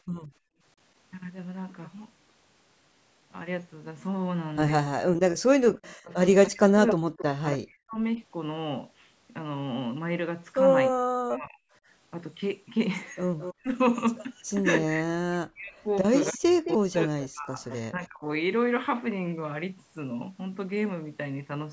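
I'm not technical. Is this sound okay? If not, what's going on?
No, there are problems typical of a phone or video call where one side uses a loudspeaker.

Background gated by the echo canceller: from 0.03 to 0.63 s the room sound dips away and then returns. The call's echo-removal system briefly turned the microphone down while the loudspeaker played. Only the background is affected, not the talker.

Speech suppressed in double talk: at 4.88 to 8.19 s, 10.91 to 11.62 s, 13.57 to 13.70 s and 14.94 to 18.25 s, the talker's voice sinks sharply, goes dull or drops out in pieces. The likely cause is both sides talking at once, so the echo remover muffled the real voice along with the echo.

Echo leak: at 6.47 to 7.57 s, 13.38 to 13.54 s and 16.21 to 18.07 s, a quieter copy of the voice follows slightly behind, about a quarter-second late (268 ms in the first stretch, 217 ms in the others). 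This is extra sound added, not sound taken away, which is likely from echo the loudspeaker side failed to remove.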